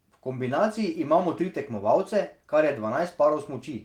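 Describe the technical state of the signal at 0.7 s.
At 0.7 s the speech signal is intact, with no audible fault at that moment.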